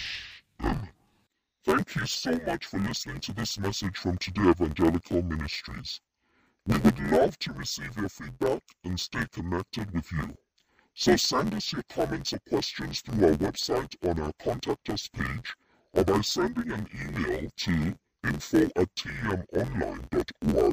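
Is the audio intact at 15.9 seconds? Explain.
No. At 15.9 s, as throughout the clip, interleaved audio is being read as planar. Each block of alternating left and right samples is split down the middle, so the first half feeds the left channel and the second half the right. Both halves play stretched to half speed. The blocks are short, about 11.61 ms, which fits a 512-sample buffer, so the speech sounds dull and robotic, with a buzz at 86.1 Hz and no clear octave drop.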